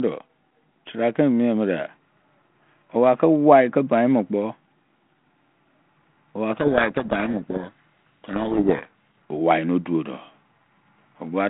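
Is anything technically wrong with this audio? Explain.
Yes. From 6.52 to 9.07 s, ending just before "owaino duodo", there is a codec payload misread on a telephone-band G.726 ADPCM link, whose roughly 150 Hz to 3.5 kHz band and light coding grain fit 32 kbit/s. The decoder takes each code word with its bits in reverse order, so the adaptive predictor is fed wrong differences. The speech is buried in harsh, rasping distortion. On a spectrogram, dense broadband noise fills the band and hides the harmonics. On the waveform, the envelope turns jagged.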